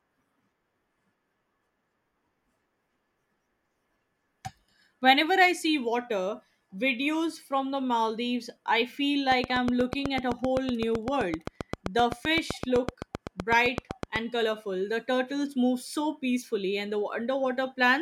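After "I feel", from 9.32 to 14.17 s, a train of clicks ticks at a steady 7.9 per second, about forty sharp pops sitting around 15 dB above the speech, likely interference from nearby equipment.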